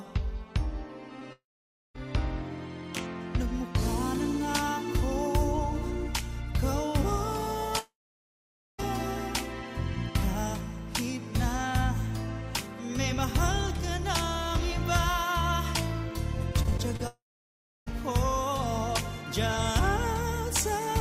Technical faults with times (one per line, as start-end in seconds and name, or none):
1.19-1.23 short concealed packet loss
1.33-1.96 long network dropout
7.79-8.80 long network dropout
16.63-17.01 repeated packet loss (robotic sound)
17.07-17.88 long network dropout